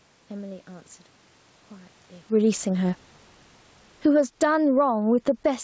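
A speech clip whose level is pulled around by automatic gain control near the end. From 3.9 s to 5.55 s the automatic gain falls, by about 9 dB, after the control judged the input too loud or its background noise too strong. The speech and the room noise sink together, which separates it from the talker moving around 2.0 s, where only the voice changes. Overlapping this, automatic gain rising starts at 4.36 s and runs to 5.63 s as the control reacts to the now-quiet input. Voice and background swell back up together over more than a second, a joint rise a closer talker wouldn't produce. The speech stays band-limited to 8 kHz by the G.722 call path throughout.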